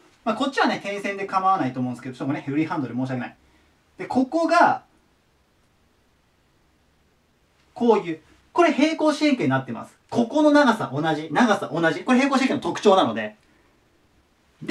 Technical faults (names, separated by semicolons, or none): clock drift between sender and receiver; repeated timing corrections